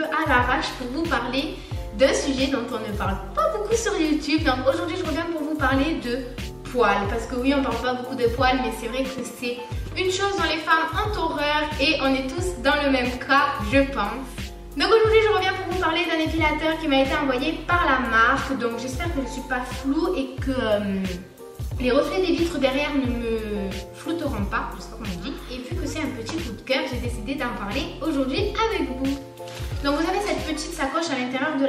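Nothing stood out on listening to this audio; no technical fault could be heard at any point.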